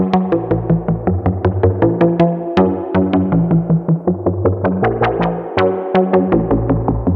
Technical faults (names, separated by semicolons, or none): none